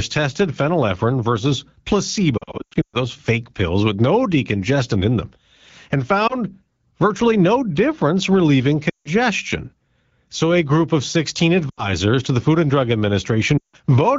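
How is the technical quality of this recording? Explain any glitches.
The recording has five brief dropouts where the sound smears, warbles or fades out, caused by lost AMR speech frames. The underlying wideband speech sounds clean, which fits AMR-WB at around 12.65 kbit/s.

The worst dropout is from 2.37 to 2.96 s, just before "fake pills with no". About 0.36 s of audio goes missing in patches spread over 0.56 s, and the longest gap is 0.12 s, so the speech stutters and blurs repeatedly. At 6.27–6.35 s, after "decongestant in them and", a single 20 ms loss causes a short dip. From 8.90 to 9.08 s, after "virtually no difference relieving", 160 ms is lost and quickly drops to near silence before the speech returns slightly rough. Further dropouts follow at 11.70–11.91 s (80 ms lost) and 13.57–13.76 s (160 ms lost).

In each case, corrupted frames failed their error check, so the decoder repeated the last good pitch and spectral settings at decreasing level. 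Because this is wideband coding, the longer gaps fade toward silence quickly.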